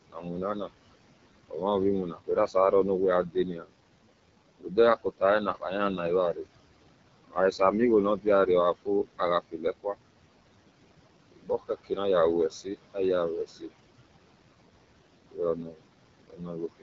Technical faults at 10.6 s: noise suppressor artifacts; AMR wideband (HD Voice) codec

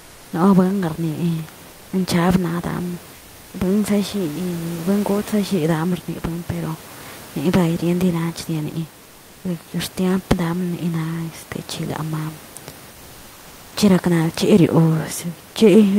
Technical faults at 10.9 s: none

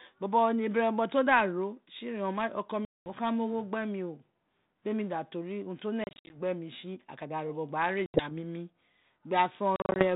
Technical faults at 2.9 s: packet loss on an ADPCM call

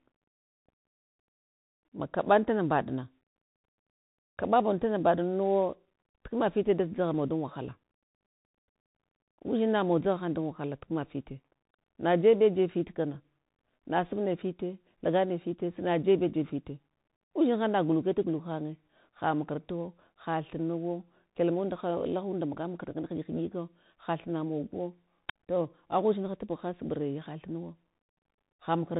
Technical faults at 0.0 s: Bluetooth CVSD headset codec

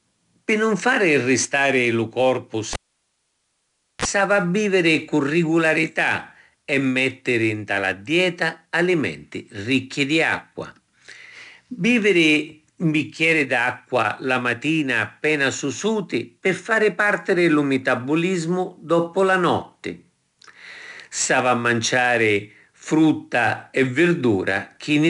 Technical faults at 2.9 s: 4-bit ADPCM compression; cable pulled and plugged in

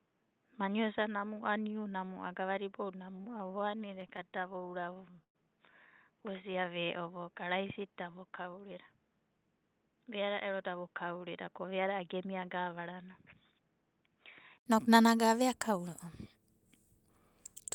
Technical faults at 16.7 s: none

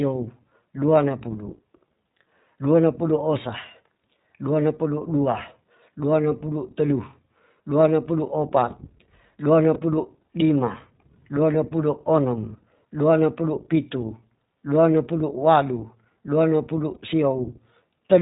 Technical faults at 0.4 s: iLBC codec

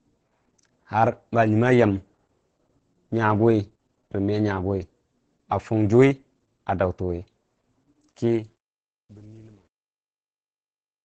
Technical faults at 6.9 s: Opus voice compression

